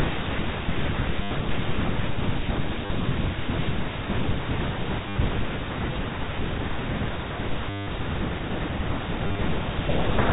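Packets were dropped and the receiver filled each gap by replaying the last good packet, a case of packet loss with the last packet repeated, at 1.23–1.31 s (80 ms), 2.86–2.90 s (40 ms), 5.09–5.16 s (70 ms), 7.70–7.87 s (170 ms) and 9.27–9.41 s, where 90 ms of losses are scattered in runs of up to 30 ms. The longer runs buzz at about 100 Hz, fitting 10 ms packets, as a robotic stutter over the 4 kHz-limited G.711 telephone band.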